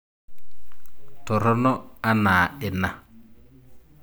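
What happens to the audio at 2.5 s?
Nothing goes wrong at 2.5 s; the speech carries on intact there, with no dropout, click, distortion or other fault at that moment.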